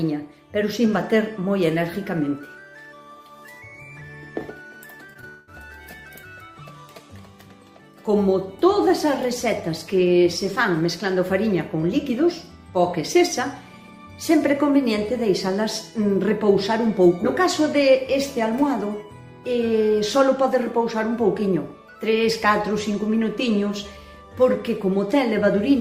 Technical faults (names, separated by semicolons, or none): short concealed packet loss; long network dropout